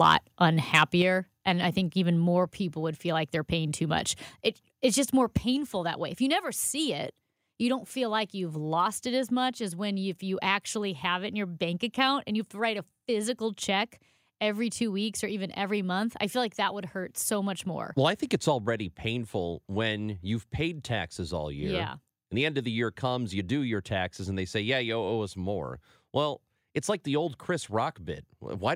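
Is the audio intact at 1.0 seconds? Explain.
No. At 1.02 s the speech and background drop together by about 5 dB and stay lower, likely a microphone volume stepped down, not a brief dropout.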